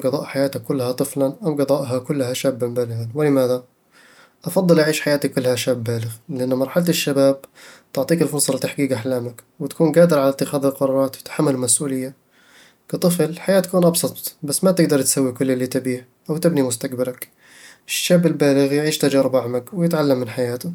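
Nothing technically wrong can be heard in this speech recording: the signal holds steady throughout, with no interruptions, level jumps or distortion at any point.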